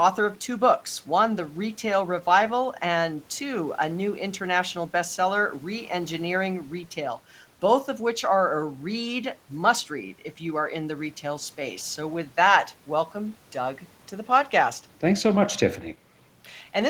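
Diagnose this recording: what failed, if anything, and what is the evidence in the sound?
Nothing in the signal chain failed: the speech holds steady level and continuity throughout, with no audible disturbance traceable to any stage from capture to playback.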